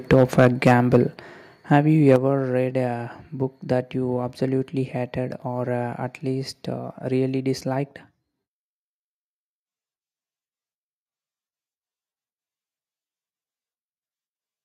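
A harsh, crackling edge sits on the loudest speech from 0.1 to 0.96 s and again from 2.09 to 2.16 s. This is microphone overload, likely from input volume set so high that peaks overshoot the converter's limit, by about 5 dB and then about 2 dB, and get their tops flattened. Speech and background also drop abruptly in level at 0.14 s, 1.14 s and 2.16 s, by about 2, 4 and 5 dB. This is the microphone volume stepped down, likely by call software reacting to the clipping and lowering the device gain in single jumps.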